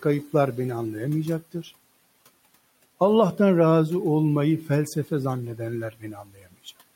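Between 1.41 and 1.71 s, and again from 5.91 to 6.55 s, speech is cut by the noise suppressor, which treats low-level speech as noise against room noise about 25 dB down. It pulls parts of the speech down by about 15 dB and 14 dB, leaving them faint and swallowed.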